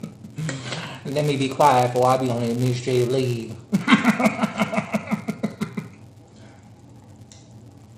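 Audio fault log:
Throughout, filter restarted on every block: the filter discards its state at each block boundary and starts from silence, so each block opens with a small transient. These arrive 200 times a second, every 5 ms, producing a 200 Hz buzz that follows the signal's level.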